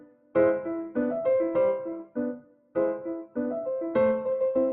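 A noise suppressor applied to music or sounds is at work throughout this audio: a processor built for speech keeps treating sustained and ambient parts of the sound as noise, so the level swings by around 10 dB as it clamps down and lets go. Sharper onsets pass largely intact, while held material and decaying tails are pulled down, giving the sound an uneven, pumping quality and a thinned-out body. Sound cut by the noise suppressor is clearest from 0.00 to 0.35 s and again from 2.41 to 2.75 s, where the reduction reaches about 12 dB. In each stretch, lasting a few hundred milliseconds, the suppressor judged the steady or fading portion to be noise and turned it down harder than its surroundings, so those passages sink and their decay is cut short rather than ringing out naturally.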